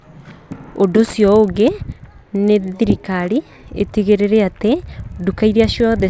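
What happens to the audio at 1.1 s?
At 1.1 s, as throughout, the resampler is restarted on every block: each 40 ms chunk is converted in isolation, so its edges are computed without the neighbouring samples. The small error at every boundary produces a buzz at 25 Hz under the speech.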